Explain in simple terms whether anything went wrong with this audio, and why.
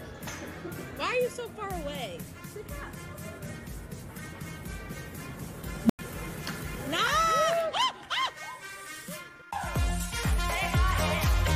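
Around 5.84 s an unstable filter blows up: a low hum swells over about 57 ms, then cuts to silence for about 95 ms until 5.99 s.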